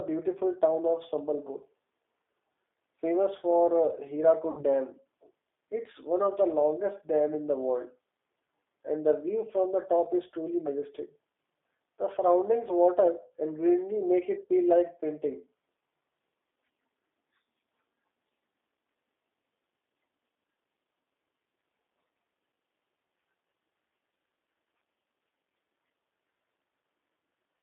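Throughout, the speech carries plainly audible G.729 codec damage. Its rough, synthetic texture points to an 8 kbit/s stream, confined to a 300 Hz to 3.6 kHz line band.

From 4.51 to 4.64 s, VoIP packet loss concealed by the speech codec occurs. About 60 ms of audio is missing. The decoder stretches earlier sound into a fading buzzy tone or coloured noise, and the voice stays weak or distorted afterwards.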